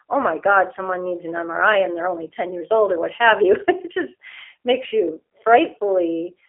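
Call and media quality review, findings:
G.729 codec artefacts throughout the speech. The band is limited to roughly 300 Hz to 3.5 kHz, with nothing above 3.6 kHz. The voice sounds plainly rough and synthetic. The CELP rebuild from a filter, pitch predictor and sparse pulses fits an 8 kbit/s G.729A leg in the call path.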